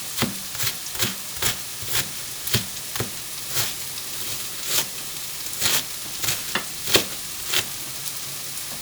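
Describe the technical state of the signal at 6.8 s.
the signal is intact at 6.8 s, with no audible fault at that moment.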